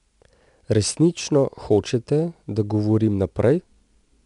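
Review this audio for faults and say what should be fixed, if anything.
4-bit ADPCM compression affects the whole speech clip. Coarse 4-bit prediction steps leave gritty, level-following hiss and a hard spectrogram ceiling near 10.7 kHz. Keep a linear PCM master instead.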